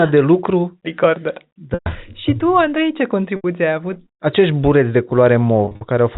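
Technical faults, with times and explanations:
1.74–1.86 s, 3.36–3.44 s (just before "ai avut") and 5.65–5.81 s: packet loss with pitch repetition. About 120, 80 and 130 ms of audio went missing. The receiver loops the last pitch period, so each gap sounds held and buzzy, then fades. The last loss comes in short bursts.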